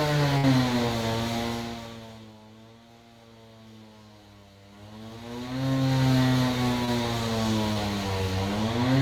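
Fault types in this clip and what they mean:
Burst of packet loss: Several consecutive packets, about 60 ms of audio, never reached the receiver in time. From 0.37 to 0.45 s the receiver extended the last sound it had and faded it down over roughly 59 ms, so a held buzz or dying hiss briefly replaces the real audio. Playback then picks up later in the sound, and the 60 ms in between is simply gone.
Short concealed packet loss: Twice, a single small piece of the stream, 20 ms each time, failed to arrive before the decoder needed it, at 6.85 to 6.89 s and again at 7.73 to 7.77 s. The receiver patched each hole by carrying the preceding sound forward, tonal or noise-like to match, then crossfaded back into the real signal. Each patch is heard as a tiny smear or wobble, and a very brief sound there could be lost.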